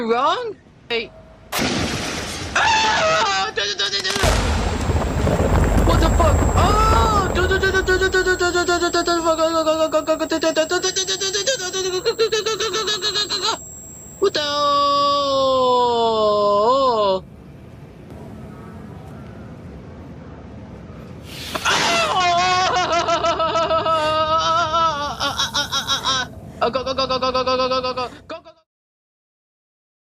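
No technical faults can be heard in this audio. Near the end, the level fades out smoothly from around 27.5 s to silence at 28.7 s, an ordinary edited fade with no click or hard edge.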